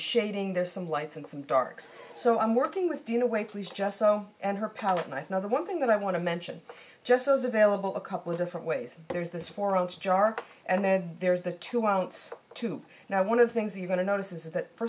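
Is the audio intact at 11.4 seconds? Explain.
Yes, the audio is intact at 11.4 seconds, with no fault audible at that moment.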